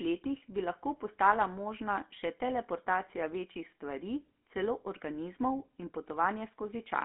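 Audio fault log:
Throughout, GSM full-rate codec: speech has a buzzy, gravelly roughness from pulse-driven vocal-tract modelling at 13 kbps, band-limited to a 250–3400 Hz line with nothing above 3.8 kHz.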